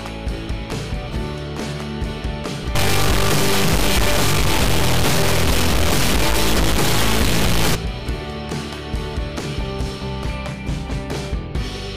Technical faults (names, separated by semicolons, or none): integer read as float